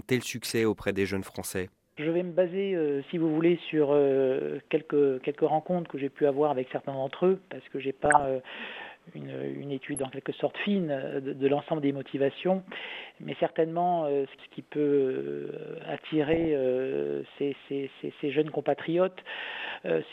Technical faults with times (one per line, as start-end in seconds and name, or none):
0.44-0.63 DAB burbling
5.44 hard clipping
8.05-8.26 DAB burbling
9.87-10.05 DAB burbling
16.25-16.48 DAB burbling
18.39-18.69 hard clipping